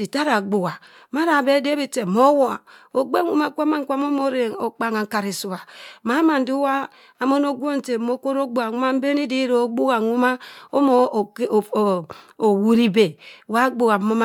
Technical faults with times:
none

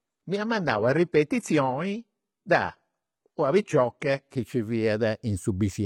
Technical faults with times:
0.00-4.36 adaptive stream starting at a low bitrate

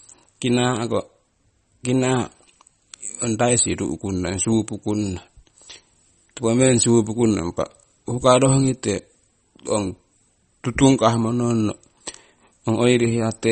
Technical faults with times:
0.00-13.51 MP3 compression

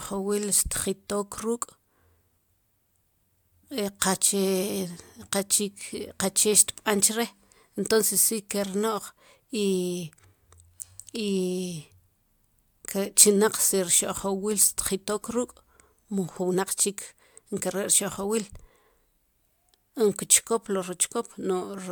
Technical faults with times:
none

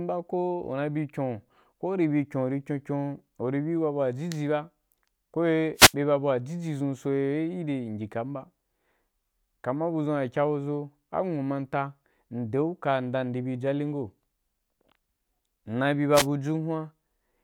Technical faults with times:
5.75-5.94 wireless microphone noise hit
16.13-16.27 wireless microphone noise hit

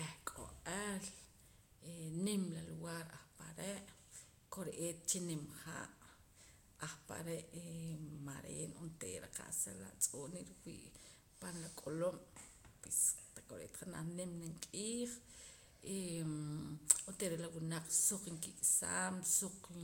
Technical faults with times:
none

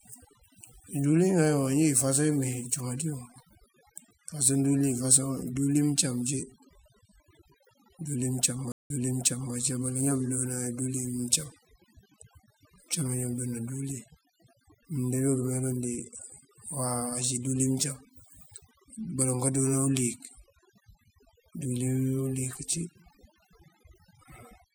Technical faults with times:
0.00-24.75 overdone noise removal
8.72-9.54 stream reconnect

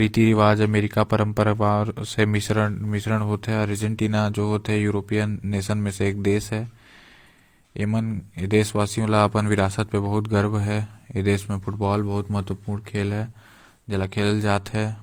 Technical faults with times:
0.00-15.03 transcoding between lossy codecs

